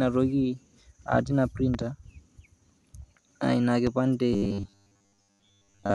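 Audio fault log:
1.74–1.84 s: loud pop, a double pop about 10 dB above the speech, likely a voltage pulse from a plug or switch; unlike a dropout, the speech continues underneath.
3.87 s: loud pop, a single sharp pop about 10 dB above the speech, again a likely electrical pulse; the speech carries on beneath it.
4.33–5.94 s: robotic sound from repeated short buffers, a rigid metallic buzz at 100 Hz as roughly 70% of the audio is replaced by repeats, likely of a 10 ms buffer; unlike a pop, it persists and loosely tracks the speech.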